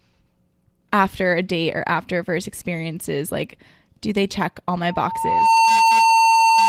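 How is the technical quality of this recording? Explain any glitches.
The recording has one clear fault, a loudspeaker feedback squeal. From 4.87 s to the end at 6.68 s, a steady 904 Hz tone swells over roughly 0.7 s. It settles about 10 dB above the speech. The microphone is picking up its own loudspeaker. At 904 Hz the loop gain passes one, so that tone keeps reinforcing itself.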